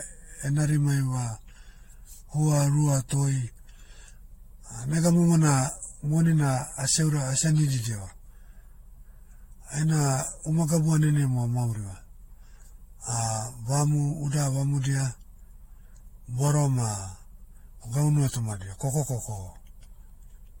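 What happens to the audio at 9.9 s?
At 9.9 s the speech carries generation loss, which runs through the whole clip rather than starting there. It sounds swirly and hollow, with consonant attacks smeared and nothing above 16.6 kHz. The likely cause is the audio being decoded and re-encoded with AAC-LC around four times at modest bitrates near 64 to 74 kbit/s. Each pass quantises on a shifted frame grid, so noise and spectral gaps pile up.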